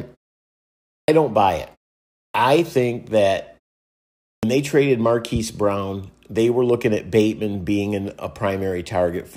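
At 0.99, 2.25 and 4.34 s there's a clipped start after a pause: the output sleeps through each silence, so about 90 ms of speech gets chopped off.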